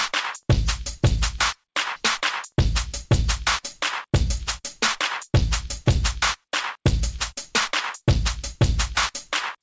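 A skip ahead at 1.96 s jumps playback forward with no gap filler, so around 0.7 s of audio is simply missing and the material on either side is butted together. This happens when a stretch is dropped in transit or discarded by an overflowing jitter buffer while later audio is already queued. Jitter buffer speed-up follows from 2.54 to 4.63 s at 105% speed and again from 5.29 to 7.36 s at 108%. Here the buffer, holding more than its target after a backlog, repeatedly trims pitch-period-sized slices, removing roughly a tenth of a second and then about 0.15 s. The sound runs hurried at unchanged pitch. Both faults sit on a call path whose G.722 coding at 64 kbps leaves nothing above 8 kHz.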